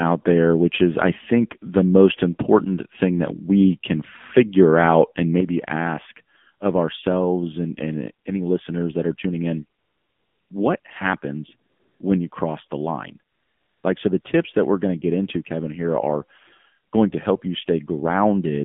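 Throughout, the speech sounds narrow and synthetic, held between about 150 Hz and 3.5 kHz: this is the AMR narrowband mobile codec at 7.4 kbps, with plainly audible coding damage.

At 5.40 s, sound and background drop together by about 6 dB and stay lower to the end, a sudden gain jump, likely a digital gain change applied without any ramp.

From 9.80 s, the real background gives way to steady, smooth synthetic noise at 9.80–10.50 s, 10.80–10.84 s, 11.70–12.00 s, 12.30–12.32 s, 13.32–13.84 s and 14.22–14.24 s. This is AMR comfort noise: the phone stopped sending speech frames, for 700 ms at the longest.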